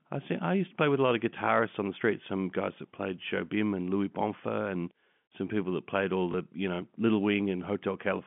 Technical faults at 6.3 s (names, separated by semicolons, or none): packet loss with last packet repeated